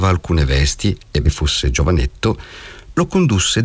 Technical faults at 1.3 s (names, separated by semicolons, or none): skip ahead